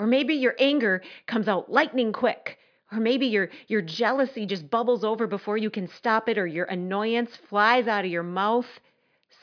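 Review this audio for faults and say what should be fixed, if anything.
Nothing needs fixing: the speech signal is technically intact, with no faults to report anywhere in the recording.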